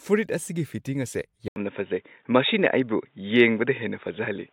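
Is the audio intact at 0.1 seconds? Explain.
Yes, at 0.1 seconds the speech plays through intact, with no technical fault at that moment.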